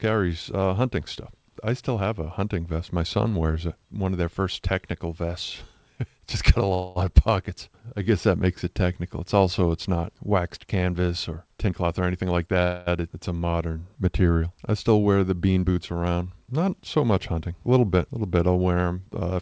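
At 6.74 s, after "got a" and before "of pockets I guess", a fading buzz fills about 0.22 s, and the sound then resumes where it stopped: a call audio freeze, likely from delayed packets draining the jitter buffer. From 11.67 to 12.59 s, after "not waxed canvas or", the sound hurries along at 120% speed with unchanged pitch. This is a jitter buffer speed-up, trimming about a fifth of a second in pitch-period slices to cut the built-up delay. A second freeze at 12.63 s holds for about 0.24 s, again likely a starved buffer. Then from 15.49 to 15.78 s, after "I still wear the", a shorter speed-up runs at 116% and drops a few tens of milliseconds. Throughout, the G.722 call path leaves nothing above 8 kHz.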